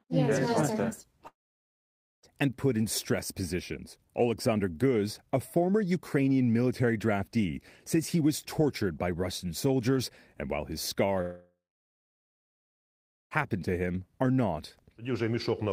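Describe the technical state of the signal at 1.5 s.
At 1.5 s the signal sits inside a gap running from about 1.27 s to 2.26 s, most likely a long network dropout. The last sound before the gap is stretched into a brief buzzy or hissy tail that fades quickly, leaving roughly 0.9 s of near silence. Speech resumes at 2.26 s, but about 960 ms of the original material never arrives.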